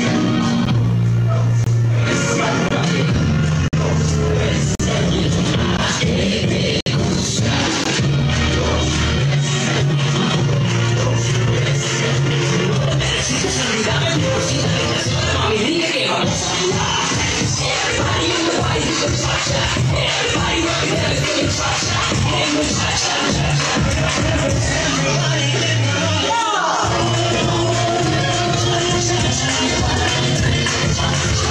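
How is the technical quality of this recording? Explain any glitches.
The recording has a repeated dropout fault in its first eight seconds. It is a gap between stream segments, heard at 0.65, 1.64–1.67, 2.69–2.71, 3.68–3.73, 4.75–4.80, 5.77, 6.81–6.86 and 7.84 s. These are hard-edged silent holes of roughly 12 to 57 ms, recurring about once per second. Each segment's timestamps leave a small gap against the next, so the player inserts silence at those joins, which fits 1 s segments. No audio is lost.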